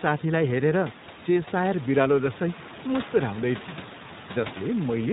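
From start to finish, the speech has the sound of the iLBC codec. Nothing above 4 kHz comes through, so the top end is cut off and sibilants lose their hiss. Each short frame is coded on its own, without help from the one before. The damage is plainly audible: a rough, slightly synthetic buzz on the voice. The texture fits 20 ms frames at around 15 kbps. Room noise sits about 16 dB below the speech and picks up the same grainy edge.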